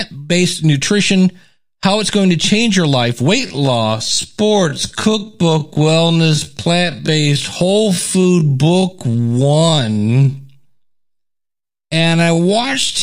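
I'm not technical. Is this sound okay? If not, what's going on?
No. From about 3.35 s to the end of the clip there's a time-stretched section: the speech suddenly slows to roughly 56% of its normal pace while the pitch stays the same. It was likely stretched by software to fill a set length, which keeps the pitch steady by repeating tiny slices of sound. Those repeated slices are why this part drags and sounds drawn out.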